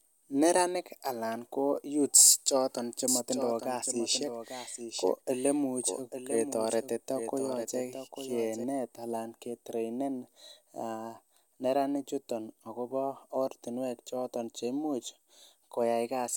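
From 3.08 s, after "anan ko youths choton", a dry copy of the speech trails about a second behind, roughly 10 dB quieter, and stops abruptly at 8.64 s before "anan kitreinen". This doubled audio track likely comes from a slower second capture path.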